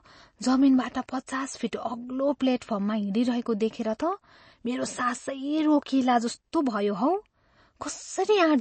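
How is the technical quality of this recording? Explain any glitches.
The recording has plainly audible codec damage running through its whole length, so the technical quality is poor.

MP3 compression, throughout: The sound has a watery, swirling texture, and nothing reaches above about 8.3 kHz. That is most likely a starved MP3 encoder, at a rate consistent with around 32 kbps. With so few bits, it cuts the treble at a fixed frequency and drops weak spectral detail that flickers on and off between frames. The result is dull, smeared speech with a metallic shimmer on s sounds.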